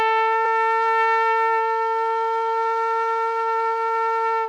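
A brief clip of sounds is marked by a single glitch at about 0.44 s. It comes from damaged data in a compressed stream. Part of the encoded file is wrong at that point. The decoder cannot read the affected frame correctly. It loses its place and hunts for the next valid frame header. What comes out meanwhile is a short glitch. It lasts only about 10 ms, then normal decoding resumes.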